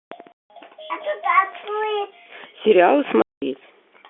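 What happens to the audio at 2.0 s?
Nothing goes wrong at 2.0 s: the speech carries straight through with the narrow telephone band of G.711 coding, and no dropout, click or distortion appears there.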